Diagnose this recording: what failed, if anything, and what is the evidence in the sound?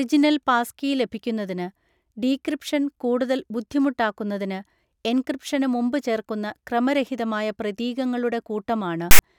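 File tags played as audio, 9.11 to 9.19 s, near the end of the clip: a hard-edged burst of loud rasp, offset to one side. A storage or playback parser read a block of text metadata as sample values, so those characters became an 80 ms stretch of pseudo-random waveform.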